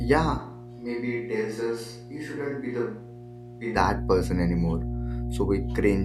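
Mains hum runs from the first moment to the end: a steady 60 Hz tone, strong enough to sit nearly level with the speech. Mains power is leaking into the signal, from a ground loop or a transformer close to the cabling.

A switch to a distant microphone occupies 0.40 to 3.75 s. The speech abruptly turns roomy and hollow, loses its bass and falls roughly 10 dB, with faint room noise underneath. The close microphone likely dropped out, leaving a farther one to carry the recording.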